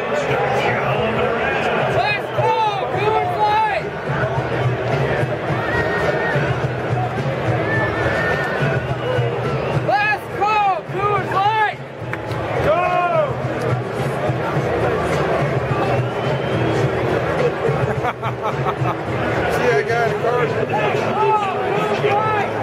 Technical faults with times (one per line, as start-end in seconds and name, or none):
none